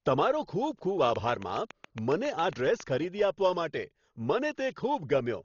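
Speech carrying heavy, dull coding damage throughout. Nothing survives above 6.9 kHz, which shows as a hard ceiling on a spectrogram, and rough, fluttering noise surrounds the voiced tones. This is likely Dolby Digital compression, and the damage fits a starved bitrate near 32 kbps. From 1.16 to 2.81 s, a regular train of clicks ticks 7.3 times a second. On the waveform these appear as about fifteen sharp, near-identical spikes standing about 10 dB above the signal, likely from interference or a faulty connection.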